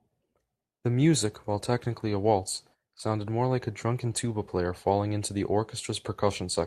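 A short speech recording with no technical faults to report: the signal carries no audible dropouts, distortion or interference anywhere in its duration.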